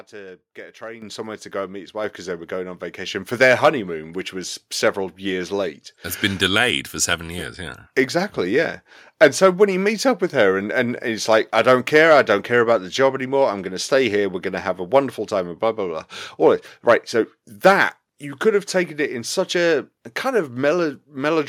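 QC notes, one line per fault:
1.02 s, 2.04 s, 3.06 s: microphone volume stepped up. The speech and background jump together by about 10 dB after "to get a", about 4 dB after "go and meet his", and about 3 dB after "they were going on". The software raised the input volume in one step each time.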